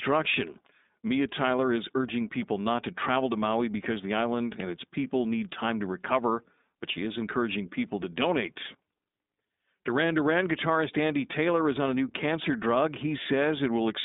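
Throughout the speech runs the iLBC codec, which sounds consistent with its 20 ms, 15.2 kbps mode. Audio is confined to a 200 Hz to 3.7 kHz band, with nothing above 3.8 kHz, and plainly audible rough, synthetic grain, unlike a simple low-pass filter, which would dull the sound without adding grit.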